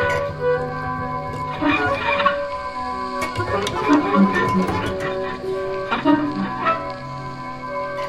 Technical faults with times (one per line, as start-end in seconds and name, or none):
none